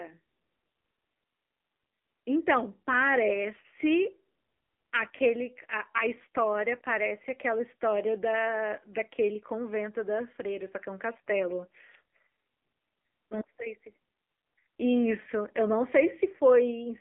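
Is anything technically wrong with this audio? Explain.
Yes, the whole clip has gone through an AMR narrowband mobile codec. Nothing above about 3.6 kHz survives, and the voice is squeezed into a phone band around 300 Hz to 3.5 kHz. The buzzy, synthetic edge points to a low-rate mode near 7.4 kbps, where too few pulses drive the vocal-tract model.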